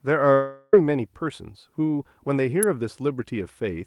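A speech clip with two faults. From 0.33 to 0.74 s there is a long network dropout. About 0.39 s of speech is missing. A fading buzz or hiss stretches the last sound across the whole gap, with no pure silence. Speech then resumes after the lost part. The likely cause is packets that never arrived. At 2.63 s an electrical switching spike adds a sharp snap or tight cluster of clicks on top of the speech. It likely comes from a nearby switch, motor or static discharge arcing into the audio line.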